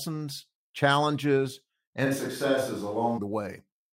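At 2.07 s the speech suddenly goes roomy and hollow, thinner in the low end, with room noise sitting around 30 dB under it, and snaps back at 3.17 s. The level barely moves. It's likely a switch to a distant microphone after the close mic dropped out.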